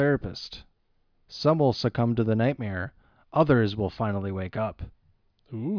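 Nothing here sounds off: the speech runs along with no technical faults to point to anywhere in the clip.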